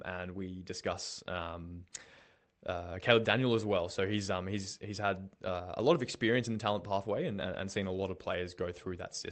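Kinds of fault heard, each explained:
No faults can be heard in this speech recording. It has come through a WebRTC call path, and the codec removes everything above 8 kHz, which fits Opus at 24 kbps.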